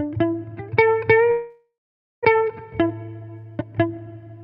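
From 1.31 to 2.27 s comes what is most likely a long network dropout. The last sound is stretched into a fading buzz, then about half a second of silence, and the sound resumes with roughly 0.6 s simply gone, unlike a brief concealed gap.

From 2.34 to 4.15 s a jitter buffer speed-up follows. The receiver trims small pitch-period pieces to shed about 300 ms of built-up delay, so the sound runs at 117% speed, hurried, yet its pitch stays unchanged, which sets it apart from a resampling error.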